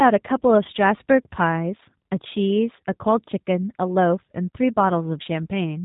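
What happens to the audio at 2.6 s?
At 2.6 s, as throughout the clip, the speech has been squeezed through a G.729 codec, consistent with roughly 8 kbit/s coding: a coarse filter-and-pulse model leaves it rough, synthetic, and cut off above 3.8 kHz.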